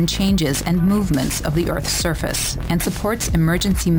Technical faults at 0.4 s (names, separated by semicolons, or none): imaging from sample-and-hold upsampling